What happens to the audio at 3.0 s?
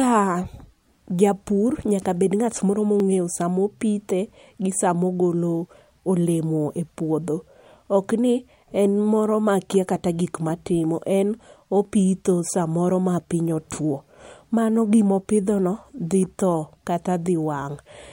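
At 3.00 s there's a single sharp click in the speech. It's likely dropped samples: well under a millisecond of the stream goes missing, so the waveform jumps straight to a later value. Nothing audible is lost, just that one tick.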